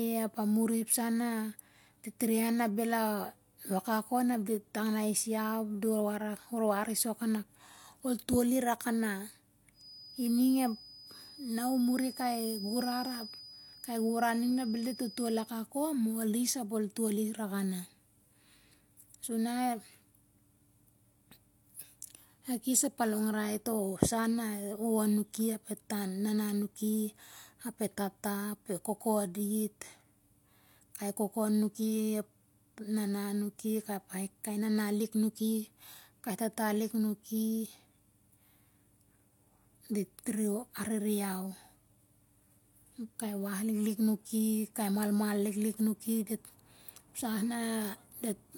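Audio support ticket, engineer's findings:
Feedback whistle, 9.72 to 15.55 s. Single 5 kHz tone behind the speech, about 20 dB below it, swelling and fading slowly. Likely cause: loudspeaker-to-mic loop near the edge of feedback, one frequency ringing without building into a howl.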